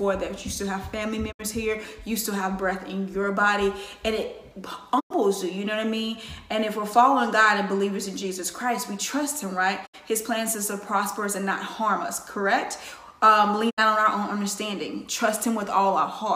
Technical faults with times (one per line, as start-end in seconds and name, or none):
1.31-1.41 digital broadcast dropout
4.99-5.12 digital broadcast dropout
9.85-9.95 digital broadcast dropout
13.69-13.79 digital broadcast dropout